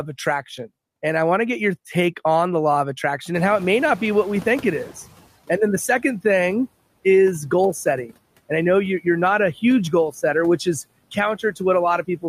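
Just after "the law of attraction", room noise jumps by about 21 dB around 3.5 s, and the noise suppressor is caught up short: from 3.34 to 5.22 s it passes the louder noise, then over 1.88 s lowers it by about 11 dB. A spectrogram shows the noise floor brightening, then fading.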